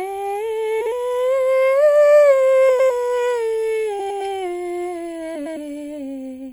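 Throughout the music, a watery, swirly texture with dulled treble and metallic chirps points to MP3 compression, likely at a low rate around 64 kbps. Frames out of order occur at 0.81–0.92 s, 2.69–2.90 s, 3.99–4.21 s and 5.35–5.57 s. In each, two adjacent blocks play swapped, producing a garbled flutter. The blocks are about 52 ms at the first and 104 ms at the rest.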